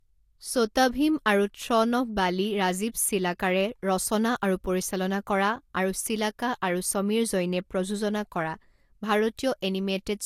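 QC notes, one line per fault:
Throughout: low-bitrate audio saved at a high bitrate. The speech has nothing above 16.5 kHz and carries the artefacts of the earlier low-rate coding, even though the file itself is a high-rate MP3, with a rate near 197 kbit/s. The cause is likely an earlier low-rate encode, consistent with something like Vorbis at about 50 kbit/s, later re-saved as MP3. The second pass could not restore the detail and band the first encode discarded.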